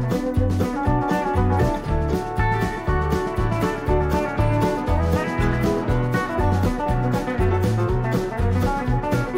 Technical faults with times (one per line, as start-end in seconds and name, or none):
0.00-9.37 hard clipping